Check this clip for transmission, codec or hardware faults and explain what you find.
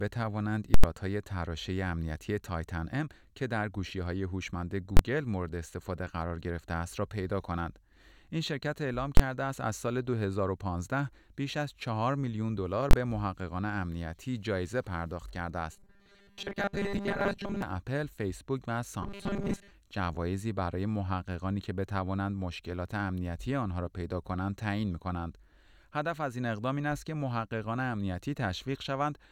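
Two kinds of fault are present in this speech clip: blocks of invalid numbers driven to full scale, and a robotic buzz from repeated short buffers.

Invalid numbers at full scale occur at 0.74 to 0.84 s, 4.97 to 4.99 s, 9.17 to 9.20 s and 12.91 to 12.93 s. A calculation produced infinite or invalid values that were pinned to the maximum. The waveform shows a flat slab at one extreme value, far beyond the speech peaks. The first block lasts about 93 ms, which fits a 4096-sample block, and is heard as a loud pop at each edge with silence between. The other three last about 23 ms each and land as single bangs.

Robotic sound from repeated short buffers runs from 15.72 to 17.62 s and from 19.03 to 19.71 s. The cause is likely that fresh audio arrived too seldom, so a 5 ms slice was replayed to fill the gaps and most of the real audio was skipped. This imposes a rigid, metallic 200 Hz buzz that still roughly tracks the speech. 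On a spectrogram it shows as evenly spaced horizontal harmonics at multiples of 200 Hz.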